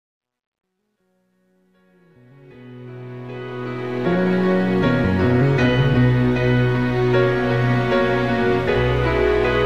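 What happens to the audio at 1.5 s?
Truncation distortion on the fade-in (0 to 4.31 s, worst before 2.12 s): with no dither, likely a 12-bit stage, the quiet rising waveform becomes square steps, gritty, with broadband speckle on a spectrogram.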